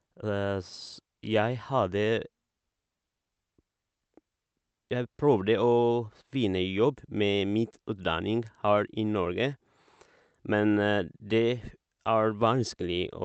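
Nothing in the speech stood out on listening.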